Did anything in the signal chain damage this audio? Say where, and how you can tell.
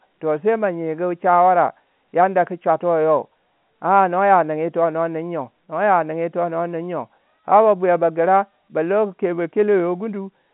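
No, nothing damaged this audio.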